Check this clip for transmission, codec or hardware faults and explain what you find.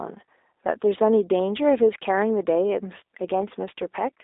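The speech has passed through a G.729 codec for its whole length. That low-bitrate VoIP coder, which fits 8 kbit/s G.729A, discards the waveform and resynthesises each 10 ms frame from a vocal-tract filter, a pitch predictor and a few pulses. The line band runs roughly 300 Hz to 3.7 kHz, with nothing above 3.8 kHz. Speech therefore sounds thin and muffled, with a plainly audible rough, synthetic buzz in place of natural voice texture.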